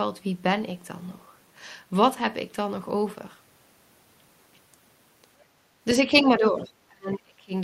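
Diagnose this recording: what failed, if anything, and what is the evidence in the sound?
Call processing is the culprit here. Between 5.44 and 5.72 s the room tone dips by about 13 dB and then comes back. That's the background gated by the echo canceller: it heard far-end playback and clamped the mic for roughly a third of a second.

From 5.99 to 7.53 s the speech itself gets pulled down, at worst by about 25 dB, affecting around a second's worth. That's speech suppressed in double talk, likely the canceller mistaking the near-end talker for echo while both sides were active.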